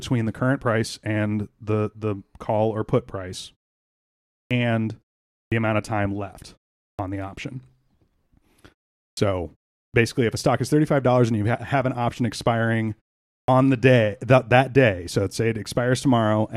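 Clipped start after a pause occurs six times, at 4.47, 5.48, 6.95, 9.13, 9.9 and 13.44 s, each following a gap of roughly half a second to a second. The output path drops into an idle state during the silence and takes time to wake, so about 37 to 43 ms of each onset is lost. Speech resumes abruptly, its opening sound missing, while the quiet pauses themselves fall to silence as expected.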